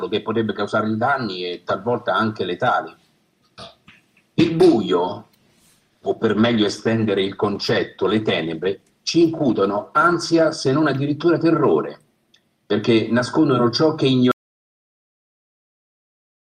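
A call bitrate drop runs from 5.08 s to 12.97 s. The encoder was pushed onto a much smaller bit budget after the connection's bandwidth estimate fell. The coarser coding turns the sound rough and watery, and the top end is cut away so it goes muffled. The degradation fits a fall from around 64 kbps to about 18 kbps. It stays at its worst for about 5.3 s before the detail returns.

An audio dropout to silence begins at 14.32 s and lasts to the end of the clip. The sound cuts off abruptly and is replaced by dead digital silence, with no room tone or background underneath. The recording kept going while its input went missing, so silence was written in place of the signal. The likely cause is a lost input, such as a disconnected device, a failed link or a stray mute.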